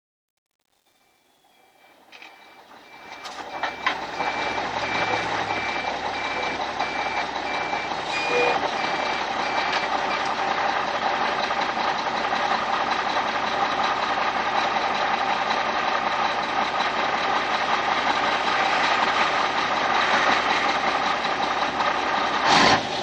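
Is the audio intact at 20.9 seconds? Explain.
Yes, at 20.9 seconds the audio is intact, with no fault to be heard at that moment.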